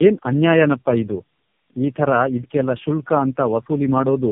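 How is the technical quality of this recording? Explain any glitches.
Quality is poor, with one fault running through the whole clip. Tandem speech coding: three speech codecs in a row each re-coded the last one's damage, leaving rough, warbly, muffled speech with nothing above 3.5 kHz.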